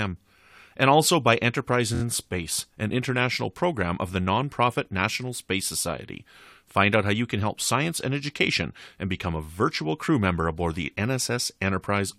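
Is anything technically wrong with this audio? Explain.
Yes, there is one fault in this speech. From 1.94 to 2.01 s there are repeated frames: a 23 ms block, which fits a single compressed frame, is played three extra times, adding about 70 ms. It sounds like a brief stutter. On a spectrogram the same 23 ms pattern is tiled four times in a row, and the waveform repeats identically.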